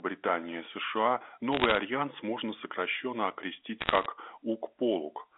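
From 1.52 to 1.78 s, just before "альянс можно сокращенно окрестить", and again from 3.81 to 4.06 s, just after it, bit errors on a digital phone line flip bits in the G.711 stream at a rate under one percent, producing quarter-second bursts of sharp ticking crackle laid over the speech.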